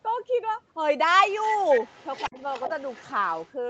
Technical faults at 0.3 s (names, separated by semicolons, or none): none